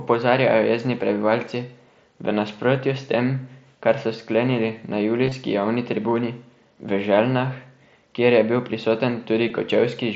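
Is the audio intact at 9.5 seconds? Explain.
No. At 9.48 s, voice packets between the Bluetooth headset and phone were dropped, a gap that fits roughly two lost frames, and the receiver filled it by repeating a closely matching piece of the preceding waveform. This concealed Bluetooth headset packet loss sounds like a buzzy tone held at full level, with a small warble where real audio returns.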